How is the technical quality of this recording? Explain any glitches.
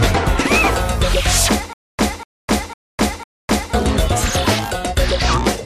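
One playback fault affects the recording. From 1.73 to 3.74 s there is a stutter with silent gaps: a 244 ms fragment replays four times, each followed by about 257 ms of digital silence, every 501 ms. This likely comes from a stalled player or stream retrying, and the audio due in that span is lost.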